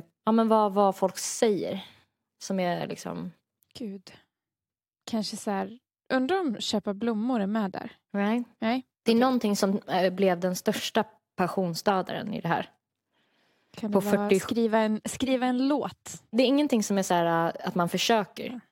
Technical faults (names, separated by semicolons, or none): none